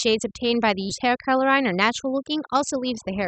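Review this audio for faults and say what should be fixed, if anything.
Overdone noise removal runs through the whole speech clip. The suppressor pulls individual frequency bands down hard wherever they sit near its noise estimate, taking quiet speech detail with them, so the background drops and breaks up into twinkling specks. Prevention: set the reduction depth lower and keep a noise floor rather than gating bands fully off.

A skip ahead occurs at 0.89 s. About 0.7 s of speech is discarded with no fill, and the audio on either side of the cut is butted together, so playback lurches forward. Prevention: cap jitter buffer growth so it never overflows and never has to discard a large block of audio already waiting.

Jitter buffer speed-up runs from 1.04 s to 3.26 s. The receiver repeatedly removes pitch-period-sized pieces, roughly 150 ms in total, to shrink an oversized buffer, so the speech plays at 105% speed with unchanged pitch and sounds hurried. 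Prevention: keep packet delivery steady and use a gentler, slower buffer-reduction rate.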